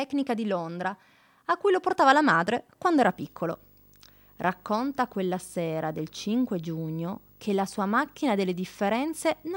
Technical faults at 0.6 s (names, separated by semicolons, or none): none